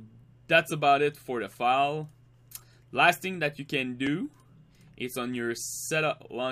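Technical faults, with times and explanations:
4.07 s, repeated buffer: a 2.9 ms block, which fits a 128-sample buffer, plays once more when new audio arrives late, with essentially nothing lost. This gives a click or brief buzz. The waveform shows a duplicated segment with a hard step at the join, and the spectrogram shows a thin vertical broadband line.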